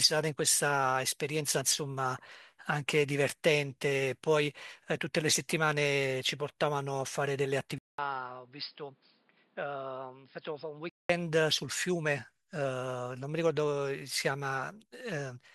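At 7.78 s, 200 ms gap; dull, quieter speech with new noise about 30 dB below it, cut at 5.2 kHz until 11.09 s: likely input switched to a poorer device.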